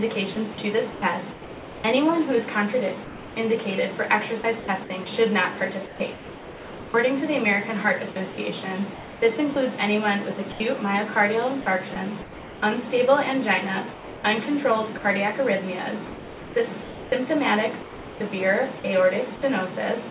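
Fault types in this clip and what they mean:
Sound chopped by the voice detector: choppy audio whose quieter stretches, about 4.7 s in total, become synthetic comfort noise, likely from the sender's voice detector repeatedly cutting transmission.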